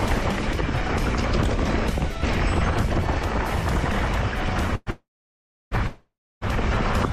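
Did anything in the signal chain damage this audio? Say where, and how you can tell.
Yes. Three call audio freezes sit close together at 4.75 to 4.89 s, 4.90 to 5.74 s and 5.87 to 6.44 s. In each one the last sound is stretched into a fading buzz, and in the two longer stalls it then drops to silence for about 0.66 s and 0.31 s. The audio then resumes where it stopped with nothing skipped, so the stalls add 110, 810 and 540 ms of delay. The likely cause is packets held up on the network, which drained the jitter buffer.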